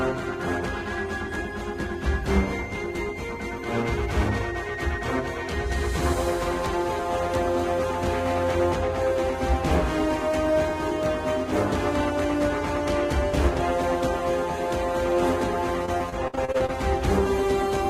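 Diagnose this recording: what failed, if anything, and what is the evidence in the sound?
The network stage failed: repeated packet loss between 15.86 and 16.70 s. Over that stretch the stream dropped out nine times, with the longest hole about 58 ms, and concealment patched each gap by extending the last received sound. Around a quarter of the span is synthetic fill, and some material is simply missing. Because the holes come in quick succession, the audio turns choppy.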